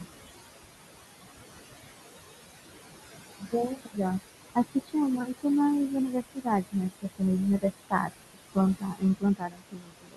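A speech recording with noise suppressor artifacts throughout. The room noise, about 10 dB below the speech, is pulled down by about 18 dB between words and swells back under them. There is also speech cut by the noise suppressor. The suppressor mistakes quiet parts of the speech for background noise and drops them by about 18 to 22 dB. Brief stretches sound swallowed at 3.4 to 3.97 s, 4.55 to 4.95 s and 6.12 to 7.21 s. From 7.6 s to the end, about a second in total goes faint.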